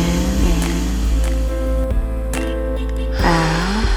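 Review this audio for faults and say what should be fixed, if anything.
A doubled audio track runs from the start of the clip to 1.84 s. A full-band second copy of the sound trails the original by roughly 0.7 s, about 5 dB quieter, with no decay or room colour, and it cuts off abruptly at 1.84 s. It is likely caused by the same signal being captured twice through a slower path, or by an edit leaving two misaligned copies. On a spectrogram, every pattern reappears about 0.7 s later as a dimmer replica. The waveform shows matching envelope shapes offset by the same gap. To prevent it, route each source through a single capture path and check edits for stacked duplicate regions.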